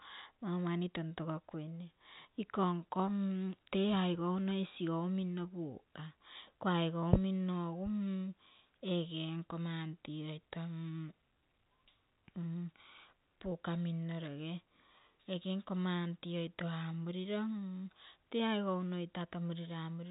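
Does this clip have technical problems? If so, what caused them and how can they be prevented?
No, this speech clip shows no technical problems.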